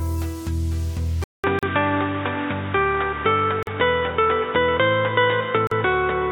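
At 1.24 s the input likely switched to a poorer device: after a 200 ms silence the sound turns boxy, with nothing above 3.8 kHz, a modest level shift, and new background noise. Separately encoded pieces joined without trimming leave gaps at 1.59, 3.63 and 5.67 s, each about 40 ms and recurring every 2 s, which briefly break the continuous sound.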